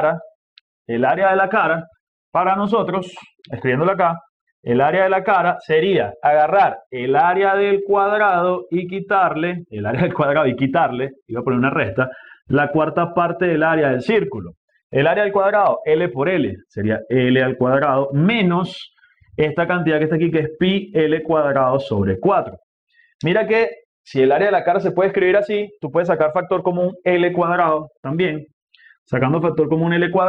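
No technical faults can be heard anywhere in the clip.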